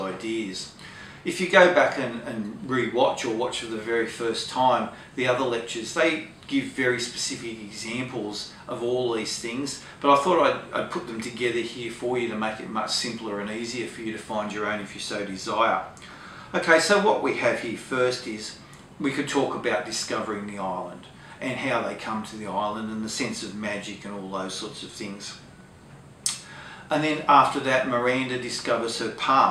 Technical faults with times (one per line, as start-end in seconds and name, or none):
14.81 dropped samples